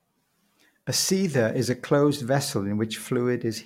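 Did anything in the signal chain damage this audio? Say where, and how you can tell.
No, nothing along the chain from capture to playback has left a mark on this speech that can be heard.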